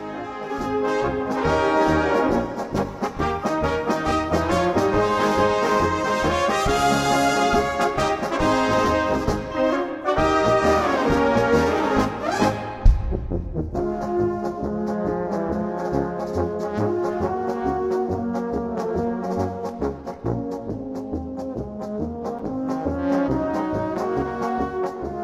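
At 22.39 s the sound cuts out for about 7 ms, a brief hole with hard edges on both sides. This is a gap between stream segments: the timestamps of adjacent segments, which fit a 6-second segment length, leave a small space that the player fills with silence. Nothing is lost.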